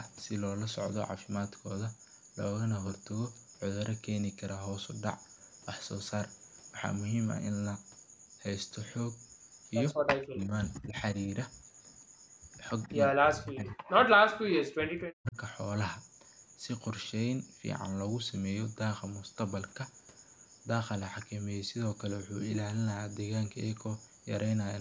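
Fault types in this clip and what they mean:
Speech suppressed in double talk: The speech dips sharply at 9.94 to 10.54 s (about 30 dB), 10.79 to 10.96 s (about 25 dB) and 13.1 to 15.37 s (up to about 40 dB), likely an echo canceller turning the line down while both sides spoke.
Echo leak: At 12.83 to 12.89 s a faint scrap of the speech returns about 140 ms late, roughly 35 dB below the direct sound, likely loudspeaker pickup that the far side's echo canceller did not fully remove before sending it back.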